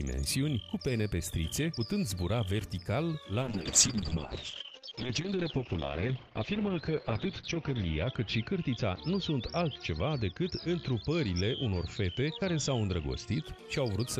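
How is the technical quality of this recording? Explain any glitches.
The recording is degraded by a call bitrate drop from 3.43 s to 13.49 s. The encoder was forced to code much more coarsely, consistent with a fall from 48 kbps to 8 kbps, and the audio bandwidth narrows from 20 kHz to 6 kHz. The sound turns rough and muffled, worst for about 4.15 s.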